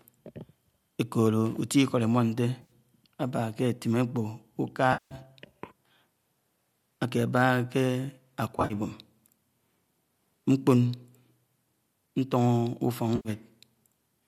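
At 2.62–2.71, 4.93–5.15, 8.58–8.74 and 13.16–13.29 s, AAC frame loss with concealment replaces 70, 180, 90 and 90 ms of speech with smeared, phasey fill rebuilt from the last good spectrum. The third loss is scattered, with gaps of about 50 ms at most. On a spectrogram these show as blurred, flattened patches. The 180 ms gap sags in the waveform envelope. The likely codec is low-delay AAC, with its short frames.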